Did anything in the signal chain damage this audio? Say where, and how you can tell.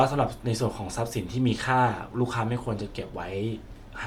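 Yes, at the codec stage, throughout the speech. The upper band sounds breathy and grainy, with noise filling in for detail. That is likely Bluetooth LC3 compression, which drops high-frequency content and substitutes noise. The plainly audible damage fits about 48 kbps with 10 ms frames.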